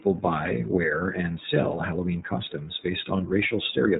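Throughout the speech, the iLBC codec coding is plainly audible: nothing above 3.8 kHz survives, so a spectrogram shows a hard ceiling there, and each 30 ms frame's excitation is coded independently, which fits the 13.33 kbps mode and leaves the speech rough and slightly synthetic.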